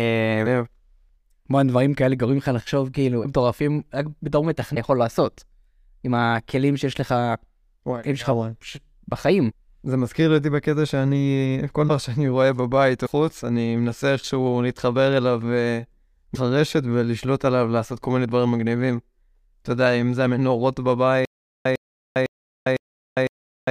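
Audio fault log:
3.23–3.26, 4.74–4.77, 9.50, 11.87–11.90, 13.05–13.08 and 16.34–16.37 s: broken MP3 bit reservoir. The speech skips forward, and each skip is followed by a brief glitch of about 20–30 ms, roughly one MP3 frame of 26.1 ms. The likely cause is dropped frames: the next frame then pulls its borrowed reservoir bytes from unrelated data and decodes garbage until the stream resynchronises.
21.25 s to end: stutter with silent gaps. A 102 ms fragment repeats four times, each time followed by about 403 ms of digital silence, giving a steady 505 ms cycle. This points to a stalled stream that likely replayed its last buffered fragment at each retry and then ran dry, so the speech that should have followed is lost.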